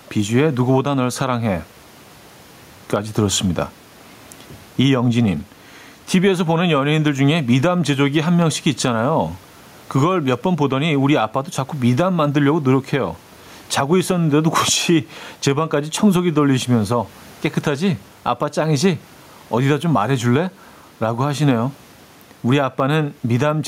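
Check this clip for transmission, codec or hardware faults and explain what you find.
One hardware-side fault runs through the whole speech clip: gain pumping. The level breathes by around 10 dB, with the room noise sitting about 38 dB below the speech. The likely cause is input gain set far too high with a fast limiter clamping down on peaks, which squashes loud and soft parts together.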